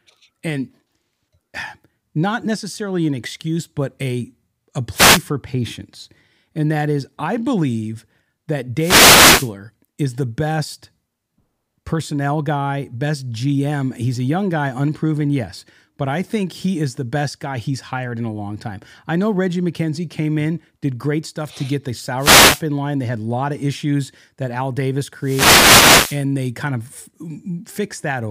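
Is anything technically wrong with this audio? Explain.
Yes. Four wireless microphone noise hits occur: 4.93–5.23 s, 8.77–9.52 s (after "is I believe that", before "is the best"), 22.17–22.64 s (after "stuff to get the", before "in line"), and 25.20–26.23 s (before "they kind"). In each, the FM radio link fades as reflected signals cancel, so receiver noise rises. Each is heard as a brief swish or burst of static.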